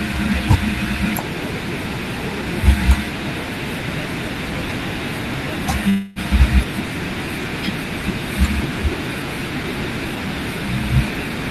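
Speech with a call audio freeze from 5.89 to 6.19 s: the sound stretches into a fading buzz or hiss, then resumes intact, likely from delayed packets draining the jitter buffer.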